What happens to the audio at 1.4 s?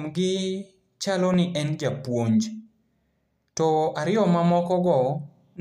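A loud pop lands just before that point, from about 1.34 to 1.36 s. A sudden electrical step or pulse, likely from a plug, switch, static discharge or driver glitch, has been added on top of the signal, and the following circuitry shapes it into a brief burst. It is heard as a single sharp pop, roughly 10 dB above the speech, lasting about 20 ms, while the speech continues underneath it.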